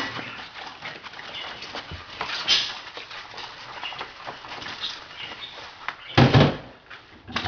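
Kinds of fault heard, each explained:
Aliasing: the sample rate was lowered without a low-pass filter first. The sound suggests a drop from 48 kHz to about 11 kHz. Everything above the 5.5 kHz fold point was mirrored back down as false tones, unrelated to the original pitches. Here the folded content sits only roughly 10 dB under the wanted sound, so bright or hissy parts come out gritty and metallic, and the band stays crowded right up to its 5.5 kHz edge.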